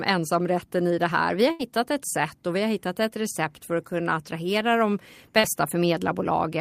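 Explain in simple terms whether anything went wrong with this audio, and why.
Two network hiccups here. From 1.51 to 1.62 s there's a burst of packet loss: about 80 ms never arrived, so the last sound gets stretched and fades, then the audio skips ahead. Around 5.39 to 5.46 s there's a short concealed packet loss: roughly 40 ms went missing and was patched by continuing the previous sound, leaving a brief smear.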